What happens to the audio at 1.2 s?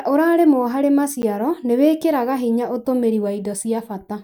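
At 1.22 s a 10 ms block of digital silence cuts the speech to zero without a fade, heard as a tick. The waveform shows a flat gap, and the spectrogram shows a thin vertical line at each edge.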